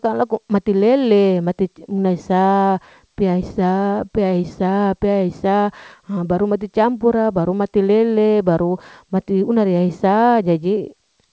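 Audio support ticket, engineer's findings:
No faults found; call path band-limited to 8 kHz.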